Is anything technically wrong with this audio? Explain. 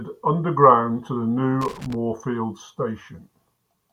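Yes. From 1.61 to 1.95 s the speech is broken up by loose connector crackle. A worn or dirty contact in the signal path is shifting and losing connection many times in quick succession, so the audio is repeatedly cut off and restored, with a click at each break and any DC on the line adding pops. For about a third of a second this comes through as a ragged, uneven burst of scratching and crackle over the speech.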